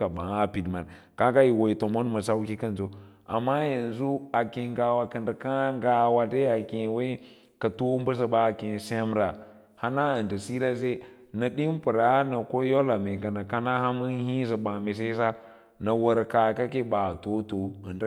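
No technical faults are audible.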